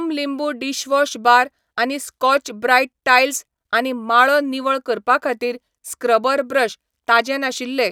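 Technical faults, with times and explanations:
5.68 s, audio missing between chunks: the recording was likely handled in blocks of about two seconds, and a tiny slice, roughly 20 ms, dropped out at the handover between one block and the next. Right after "करपा खातीर", the speech jumps forward with no gap of silence. The two edges are butted straight together, so a small piece of the sound is skipped rather than paused, leaving a brief jolt in the flow.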